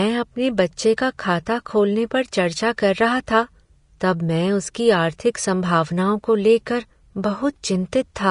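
From start to finish the speech sounds hissy and grainy, with nothing above 10.5 kHz and softened consonant attacks. That's likely Vorbis compression at a low setting, the treble quantised so coarsely that detail turns into noise, which fits a bitrate around 35 kbps.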